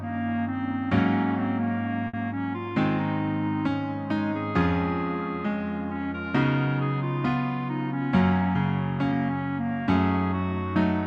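At 2.07 s there is a short stall from a late packet, lasting until about 2.16 s. A packet arrived behind schedule and the jitter buffer ran dry. The receiver held the last sound for about 60 ms instead of leaving a gap. Nothing is lost; playback resumes from the same point. The result is a sound stretched too long, with a faint buzz or dip. Everything after this point plays about 60 ms later than before.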